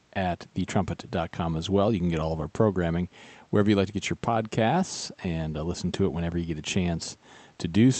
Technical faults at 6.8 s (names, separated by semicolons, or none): none